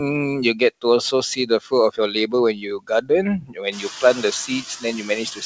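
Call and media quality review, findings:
Noise suppressor artifacts, whole clip: residual background sinks between words and rises under the voice. The suppressor only pulls the steady noise down by about 4 dB. Band limit stops at 8 kHz, consistent with a G.722 call leg around 64 kbps.

Speech cut by the noise suppressor, 0.54 to 3.1 s and 3.41 to 5.46 s: soft consonants and word tails get swallowed, around 0.7 s in total across the first stretch, with dips as deep as about 22 dB and then about 19 dB. Room noise jumps about 24 dB near 3.5 s, sitting about 15 dB under the voice, and the suppressor keeps classing quiet speech as noise.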